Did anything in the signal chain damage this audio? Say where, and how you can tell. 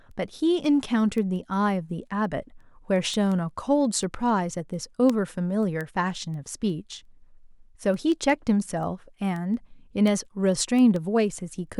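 Yes. Sharp ticks of uneven strength recur steadily, about five per second, from 0.11 s to 11.67 s, roughly seventy in all. These are word clock ticks at a digital link: the receiver's unlocked clock drifts by about 100 ppm, so each slip drops or repeats one sample.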